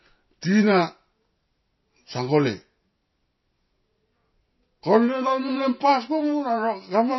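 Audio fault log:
Throughout, MP3 compression: the speech is audibly damaged, with nothing above 5.8 kHz and a watery, swirly quality where weaker frequency components flicker on and off between frames. This is likely the result of MP3 encoding at a very low bitrate, which fits roughly 24 kbps. The encoder runs short of bits, drops the treble at a fixed cut-off, and zeroes the quieter spectral lines, so sibilants turn dull and chirpy and onsets smear.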